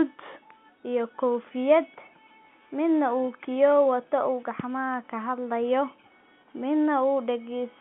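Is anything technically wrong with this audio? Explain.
No, nothing technically wrong stood out on listening to this speech clip.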